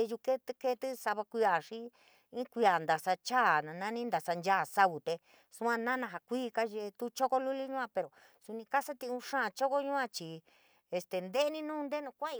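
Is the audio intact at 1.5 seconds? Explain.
Yes, the speech at 1.5 seconds plays through cleanly, with no dropout, click or other fault at that moment.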